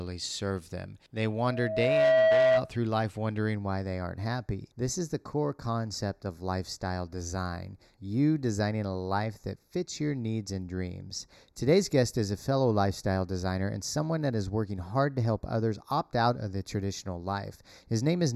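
At 1.30 s a loudspeaker feedback squeal kicks in: the mic is hearing its own speaker, and the loop runs away at 642 Hz. The tone swells over under a second into a howl, sitting roughly 10 dB above the speech, then drops out at 2.72 s.

From 3.55 s right through to the end there's channel delay causing comb filtering. One channel trails the other by a fraction of a millisecond, so summing to mono cancels a run of evenly spaced frequencies starting around 3 kHz, leaving the speech hollow and phasey.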